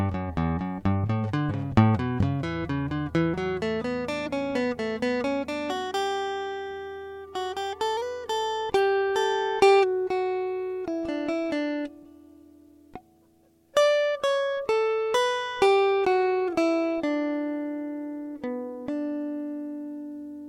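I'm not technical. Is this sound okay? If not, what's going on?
Yes, this music sounds fine, and nothing in it points to a technical problem. There is nothing that needs fixing here.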